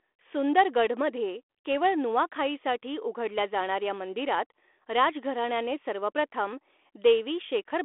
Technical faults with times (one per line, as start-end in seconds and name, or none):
none